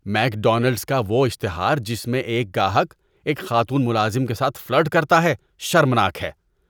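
No technical faults can be heard anywhere in this recording.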